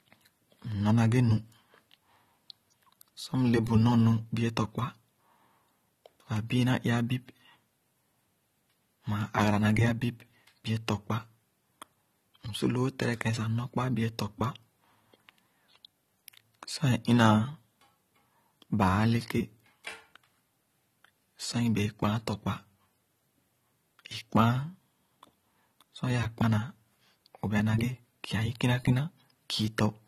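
AAC compression is audible across the whole speech recording, from start to finish. The sound is dull and smeared, with nothing above about 13.8 kHz, and sibilants and held vowels take on a fizzy, warbling texture. This is likely the work of an AAC-LC encoder starved of bits, which fits a rate around 32 kbps: it lowers the cut-off and leaves gaps in the spectrum that the ear hears as swirl and lost crispness.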